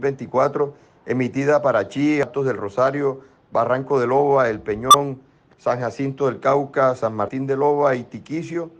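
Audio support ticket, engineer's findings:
Compressed frames skipped, 2.23–2.25 s and 7.27–7.29 s. Audio jumps ahead roughly 100 ms, then roughly 70 ms. Decoder path: whole frames missing or rejected as damaged.

Corrupt frame decoded, 4.90–4.95 s. Brief error peaking around -5 dBFS, spanning about two frames. Decoder accepted bit-flipped frames; misread gains and codes placed energy at wrong frequencies for each damaged frame's duration.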